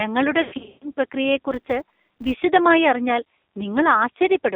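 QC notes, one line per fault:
Throughout: AMR narrowband mobile codec. Audio sits in a 250 Hz to 3.7 kHz band and sounds buzzy and synthetic, which fits a low rate around 5.9 kbps.
0.42 to 0.92 s: lost AMR speech frames. About 300 ms goes missing across 400 ms. The decoder stretches its last good settings, so sound smears and sags, worst in a 140 ms run.
1.52 to 2.44 s: filter restarted on every block. A 200 Hz buzz rides the level, pointing to a filter starting cold every 5 ms and ticking at each block start.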